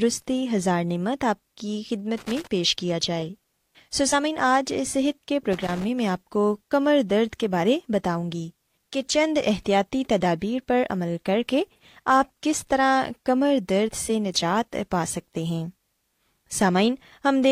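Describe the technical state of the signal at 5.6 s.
At 5.6 s you're in a burst of loose connector crackle, running from about 5.53 to 5.84 s, so roughly a third of a second. What's going on is a worn or dirty contact somewhere in the chain making and breaking as it shifts, chopping the speech signal on and off. It comes across as an irregular, scratchy crackle over the voice.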